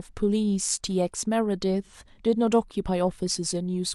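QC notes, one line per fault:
1.84–1.92 s, AAC frame loss with concealment: a brief smeared, noisy patch in the speech where about 43 ms of audio is missing, consistent with a single lost frame. The decoder covers the gap by reusing the last good spectrum with altered phase, so it sounds blurred.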